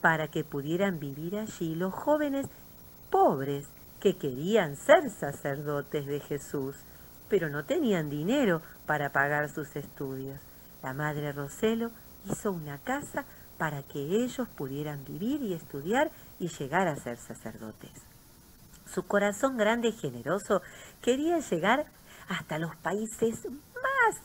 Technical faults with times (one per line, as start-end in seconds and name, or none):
0.00-16.45 video or display buzz